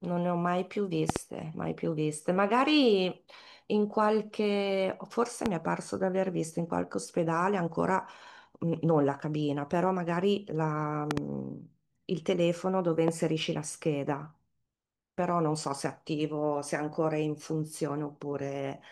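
Loud pops land at 1.10–1.18 s and 11.11–11.20 s as double thumps, and singly at 5.46–5.48 s and 13.08–13.10 s, far louder than the speech. A likely voltage spike was added to the signal. Unlike a dropout click, the speech continues beneath.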